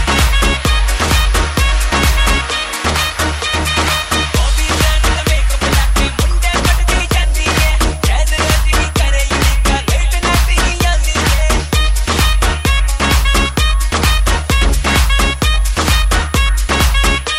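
From start to finish a thin, high whistle sits behind the sound, wandering in pitch between about 10.1 and 10.5 kHz and lying roughly 25 dB below the program level. This is switching supply whistle: a switch-mode power supply feeding the recording chain is running in an audible burst mode or beating against another supply, and its switching frequency leaks into the audio path, shifting as the load on it changes.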